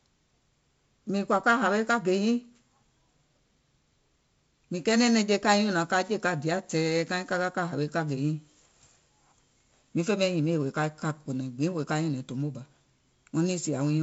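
No faults heard in this speech.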